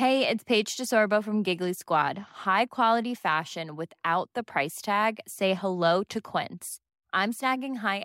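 Nothing technically wrong turns up anywhere in this speech recording, so there's really nothing to flag here.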